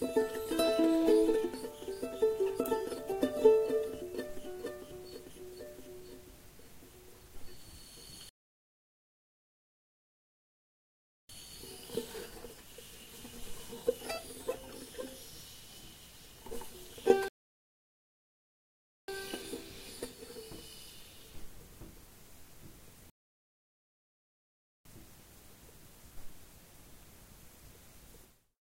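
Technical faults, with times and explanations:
8.29–11.29 s, 17.28–19.08 s, 23.10–24.85 s: rebuffering stall. The sound halts into silence for 3.0 s, 1.8 s and 1.75 s while the player waits for data, then picks up exactly where it stopped. Unlike a dropout, nothing is skipped; the gaps only add time.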